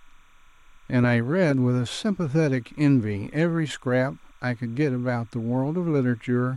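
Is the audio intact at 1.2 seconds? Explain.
No. At 1.2 seconds, as throughout the speech, a faint, steady chirping warble sits well below the voice, roughly 35 dB down. This is timecode bleed: a neighbouring 30-frame linear timecode signal leaking in, flipping between tones near 1 and 2 kHz.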